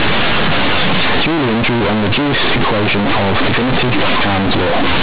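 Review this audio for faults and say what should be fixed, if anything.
The decoder is treating mu-law bytes as plain linear 8-bit samples, so companded audio read as linear runs through the whole clip. The logarithmic codes are never expanded, so every sign change throws the output across roughly half its range and quiet passages come out as loud as peaks. The speech turns into harsh, very loud buzzing distortion, and the pauses fill with heavy noise rather than near-silence, even though the underlying G.711 mu-law telephone coding at 8 kHz is sound. Declare the stream as mu-law at the playback or import stage so each byte is expanded through the mu-law table before it reaches the output.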